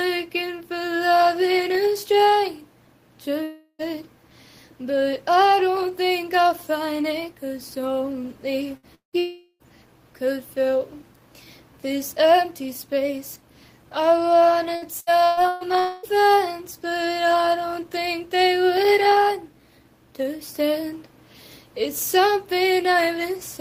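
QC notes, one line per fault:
3.43–3.82 s, long network dropout: likely a stall in the incoming stream; about 0.36 s of audio is lost, bridged by a fading continuation of the preceding sound, then a brief silence before resuming.
8.77–8.86 s, burst of packet loss: a short run of packets went missing; roughly 60 ms is skipped, covered by the last sound held and decaying, so the audio jumps ahead.
8.95–9.16 s, long network dropout: the stream likely stalls again; about 0.18 s disappears, partly covered by a decaying tail, leaving roughly 0.11 s of silence.
9.19–9.63 s, long network dropout: almost immediately, a further gap of about 0.42 s is patched by a fading extension, followed by a very short silence.
14.76–15.64 s, repeated packet loss (robotic sound): four separate losses in quick succession, the longest about 0.12 s; concealment covers roughly 42% of the span, so the sound turns choppy.
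15.79–16.06 s, long network dropout: about 0.24 s goes missing and is filled entirely by a stretched, fading continuation with no silence, before the audio picks up further along.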